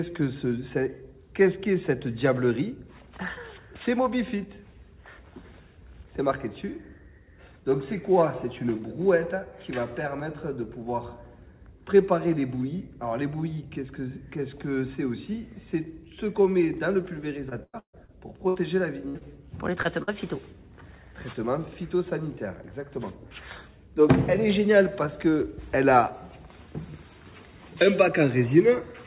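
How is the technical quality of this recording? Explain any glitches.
The recording has packet-loss damage concentrated between about 17 and 20 seconds. The call path itself cuts everything above 4 kHz, which fits narrowband G.711 A-law telephone coding, so the whole clip sounds band-limited.

From 17.02 to 19.23 s there is repeated packet loss, heard as a robotic sound. Eight separate gaps opened in the stream, the longest 137 ms, and the receiver patched each one by extending the preceding sound. About a fifth of this stretch is synthetic fill, so the audio turns choppy and robotic, with fragments missing.

From 19.83 to 19.87 s comes a short concealed packet loss. Roughly 20 ms of audio failed to arrive in time, and the decoder papered over it by continuing the last waveform before easing back into real signal. This leaves a brief smear or wobble where a tiny piece of sound drops out.

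From 20.03 to 20.10 s there is a burst of packet loss. A run of data went missing, and the receiver stretched the last sound while fading it down over about 50 ms. The result is a short held buzz or fading hiss, after which the audio picks up slightly further along, with the span in between lost.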